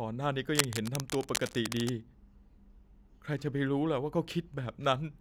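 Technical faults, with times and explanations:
0.53–1.9 s, cable scratch noise: dense, uneven scratching bursts sit over the speech, nearly as loud as it, likely from a worn connector being moved.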